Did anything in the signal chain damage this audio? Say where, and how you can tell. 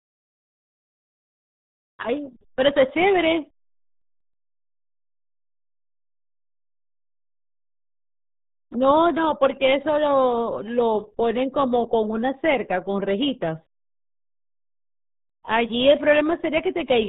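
Yes. The RealAudio 14.4 codec runs throughout this speech. At the codec stage, nothing passes above 3.8 kHz, and heavy coding damage leaves the sound muffled and gargly, which fits a dial-up-era codec at about 8 kbit/s that discards bandwidth and smears spectral detail.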